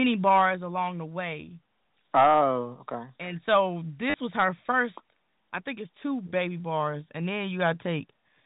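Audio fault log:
2.15–2.45 s, hard clipping: the speech peaks are driven about 7 dB past what the stage can pass, so their tops are sheared flat. That adds a harsh, gritty crackle on the loudest moments. It is not the soft rounding of gentle saturation, and it stops cleanly at 2.45 s.
4.10–4.14 s, packet loss with last packet repeated: 40 ms of audio is missing, and the gap is filled by replaying the previous fragment. That fits four 10 ms packets and gives a brief robotic stutter with a buzz near 100 Hz. It is not a silent dropout, because sound keeps playing through the gap.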